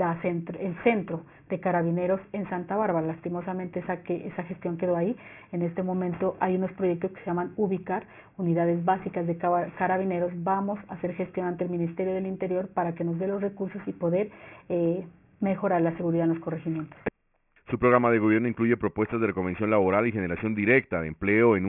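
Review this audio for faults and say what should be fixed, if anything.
Aliasing runs throughout: content above about 3 kHz folds back into wrong, gritty pitches roughly 25 dB down, fitting a 6 kHz rate; spectrogram shows energy slammed against 3 kHz. Prevent it by low-pass filtering below the new Nyquist limit before downsampling.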